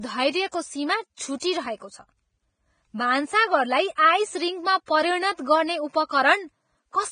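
A speech clip with heavy, likely Vorbis compression damage throughout. Nothing is heard above 9.7 kHz, and the treble is hissy and grainy, pointing to a bitrate near 22 kbps. Pre-echo occurs at 0.51 s, at 1.39 to 1.42 s, and at 4.86 to 4.88 s just before "परिणत गर्ने". Short hiss, spread over 16 to 30 ms, smears each attack because block-wide quantisation noise leaks ahead of it.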